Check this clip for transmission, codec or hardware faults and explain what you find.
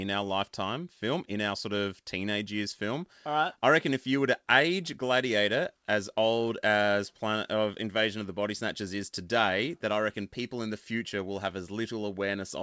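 Nothing wrong turns up here: the speech comes through the call path band-limited with nothing above 8 kHz, which fits a wideband G.722 link working as intended.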